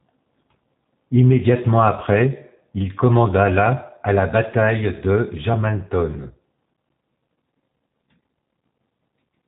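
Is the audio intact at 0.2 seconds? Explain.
No. At 0.2 seconds, as everywhere in this speech clip, the voice sounds slightly rough and synthetic, and nothing is heard above about 3.8 kHz. This is G.729 codec damage, plainly audible and present throughout. The codec does not send the waveform. It rebuilds each 10 ms frame from a vocal-tract filter, a pitch predictor and a few pulses, and the result fits G.729A at 8 kbit/s.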